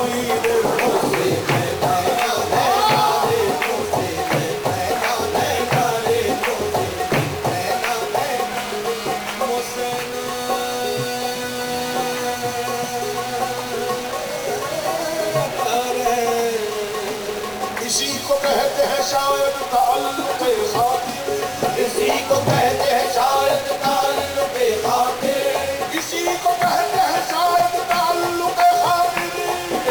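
From the first second to the last, a distortion rides on the sound, and the quiet gaps are filled with a gritty noise floor instead of silence. The likely cause is a stuck bit, with one data line held at a fixed value so that roughly half the samples are pushed off by the same amount. On a waveform the trace looks stepped and offset in a waveform-dependent pattern. A spectrogram shows broadband hash spread across the whole band, even where the level drops.

Also present throughout is clock drift between sender and receiver. The sending clock runs fast, around five percent ahead. Because more audio arrives than the receiver plays out, its buffer keeps filling, and it has to discard short pieces to keep up. The result is small, irregular timing stumbles scattered through the clip rather than a smooth, even pace.

Those adjustments are clearest as repeated timing corrections. From 6.10 to 10.19 s the cuts amount to a 101% speed, a barely perceptible push with the occasional slight hiccup. 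From 15.79 to 29.01 s the rate rises to 106%, and the tempo turns unsteady, with tiny skips. In the waveform these show as abrupt splice points where the cycles jump. On a spectrogram they appear as thin vertical seams that recur at uneven intervals across each stretch.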